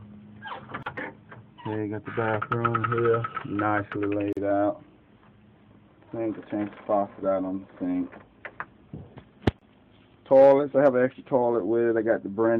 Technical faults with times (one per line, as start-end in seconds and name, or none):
0.83-0.86 gap at a join of encoded pieces
4.33-4.37 gap at a join of encoded pieces
9.59-9.61 gap at a join of encoded pieces